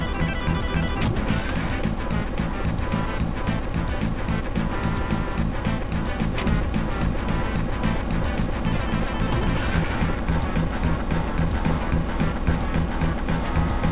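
No technical faults are audible.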